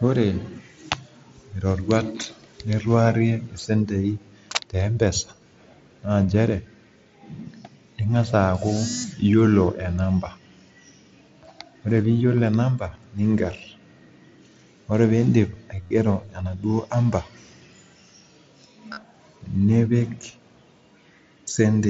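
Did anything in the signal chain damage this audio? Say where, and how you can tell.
Yes. At 15.82 to 15.91 s and again at 18.93 to 19.03 s the speech turns briefly buzzy and tonal, a held, evenly loud drone with a slight warble as the real signal comes back. This is concealed Bluetooth headset packet loss on the wireless link from headset to phone, carried over the mSBC headset codec. In each window of about 90 ms, roughly 60 to 70 ms of audio went missing, which points to several lost packets. The longest unbroken gaps were 30 ms in the first event and 37.5 ms in the second. The receiver filled each hole by repeating the closest-matching slice of the previous few tens of milliseconds, and those short loops are what produce the drone.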